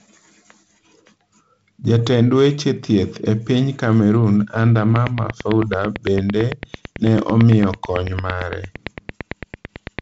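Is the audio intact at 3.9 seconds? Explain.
Yes, the audio at 3.9 seconds is intact, with the speech carried normally through G.722 wideband telephone coding.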